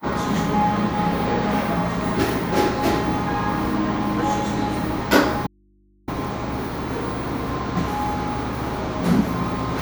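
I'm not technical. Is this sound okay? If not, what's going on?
No. From 5.47 to 6.08 s, about 0.6 s, there's an audio dropout to a faint residue. The sound cuts off abruptly, leaving only a low mains hum. It's not a pause or fade, because the hum shows the line stayed live, likely after a brief signal loss.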